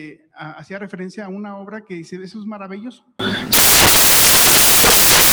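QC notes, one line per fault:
3.19 to 5.32 s, samples built from the wrong bytes: from 3.19 s to the end, the sound turns into loud, harsh broadband noise. The reader is assembling each sample from mismatched bytes, whether shifted by one, swapped in order, or misaligned, so the rapidly fluctuating low-order bits end up as the dominant part of every value. The signal's structure is lost in that noise.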